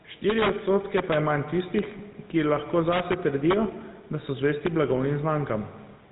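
A speech recording of about 6 seconds with two problems running all the way through. The first is gain pumping. The faint room noise sits roughly 35 dB under the speech, and the level shifts by around 5 dB each time the talker gets loud. That pattern most likely comes from an input set far too hot and a fast limiter or compressor clamping down on every loud syllable. It differs from a noise gate, which cuts the background to silence between phrases. Here the dynamics sound flattened and squashed. The second fault is the GSM full-rate codec, and its damage is plainly audible. The voice has a buzzy, gravelly roughness because the codec rebuilds it from a vocal-tract model driven by sparse, regularly spaced pulses. Nothing comes through above 3.8 kHz, which fits a 13 kbps GSM stream. A plain low-pass filter or narrowband resampling would sound only muffled. That grainy texture on top of the muffling is what marks this codec.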